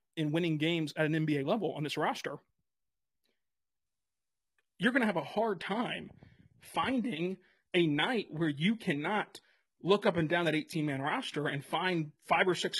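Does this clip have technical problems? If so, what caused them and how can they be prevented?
Yes. From about 3.86 s right through to the end, the speech drops in quality with no gap: codec smearing comes in suddenly. That's an adaptive stream at a lower bitrate. The player switched down when the connection slowed, and the sound fits a jump from roughly 96 kbit/s AAC to a 16 kbit/s HE-AAC rendition. A bigger playback buffer or a higher minimum rendition would prevent it.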